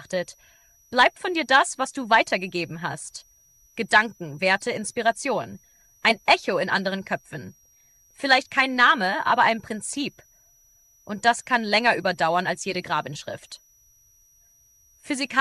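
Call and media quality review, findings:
Switching supply whistle, throughout the clip. Thin high tone sitting around 5.7 to 5.9 kHz, wandering inside that band rather than holding one pitch, roughly 35 dB under the programme. Probable component: a switching power supply in the chain dropping into audible burst mode, or two supplies beating against each other. The small pitch drift follows load changes on the rail. Check grounding and PSU placement near the analogue front end.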